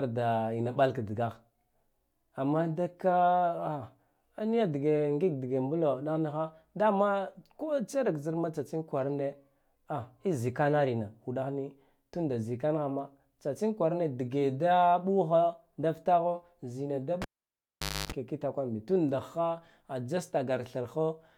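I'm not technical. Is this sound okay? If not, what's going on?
No. At 17.22 s the speech is interrupted by a cable pulled and plugged in: a lead carrying the sound was disconnected and reconnected while live. You hear a sharp pop, then near silence for about 0.85 s, including roughly 0.28 s of low buzz from the 50 Hz mains supply, picked up while the plug was only partly seated. A second pop marks the reconnection, and the speech returns at 18.12 s.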